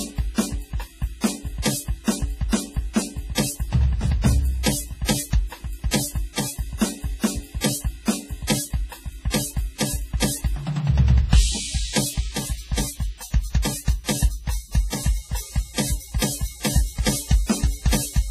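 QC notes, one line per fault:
Throughout: WMA compression, heavy. The music sounds ringing and washy, with a hiss that swells and fades along with the signal. Nothing is heard above 15.2 kHz. The likely cause is a simple transform encoder of the WMA 1 kind using long blocks. Its quantisation noise smears across tens of milliseconds around each sound. Quiet spectral detail has been dropped altogether. The damage fits a low bitrate of around 24 kbps.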